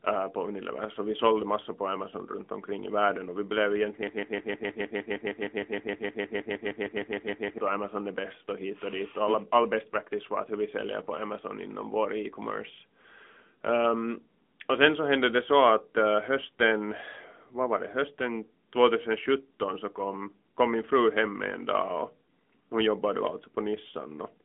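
From the first second to the last, the speech carries AMR narrowband mobile codec damage. Everything above 3.8 kHz is gone, and the useful band sits roughly between 200 Hz and 3.5 kHz. The voice has the buzzy, synthetic edge of a low-bit vocal-tract model, which fits the 10.2 kbps AMR-NB mode. On a spectrogram this shows as a hard, flat ceiling near 3.8 kHz with empty space above it across the whole clip, and smeared, grainy formant detail below.

From 4.07 s to 7.58 s a broken-record loop takes over. A fragment 155 ms long plays 23 times back to back, producing a rapid, stuttering machine-gun repetition, and the audio that belonged to those three and a half seconds never arrives. The likely cause is a stalled player or stream resending the last fragment in its buffer. A waveform shows identical blocks repeating every 155 ms, and a spectrogram shows the same pattern stamped out at that spacing.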